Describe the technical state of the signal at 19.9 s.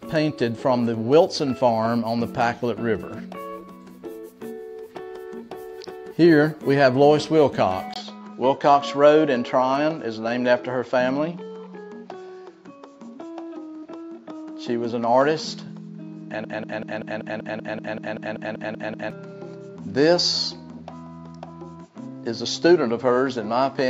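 At 19.9 s the sound is dull and narrow, with nothing above 7.6 kHz and a faint new noise floor about 50 dB down at much the same level. This began at 7.94 s after a 20 ms gap and continues to the end. The likely cause is an input switched to a poorer device, whose narrower band sets the new tone.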